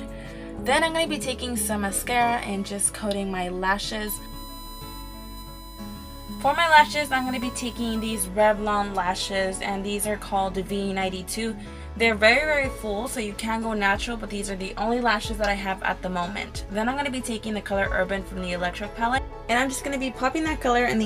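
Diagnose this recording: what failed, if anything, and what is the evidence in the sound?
USB whine sits in the analogue wiring, through the power or ground path. From 4.07 s to 8.28 s a steady tone at 1 kHz runs under the sound, roughly 20 dB below it. Its pitch does not move. That fixed 1 kHz matches the bus's 1 ms frame rate. Each frame pulls a burst of current. The resulting ripple on the supply or ground reaches the audio input and is recorded as a whine.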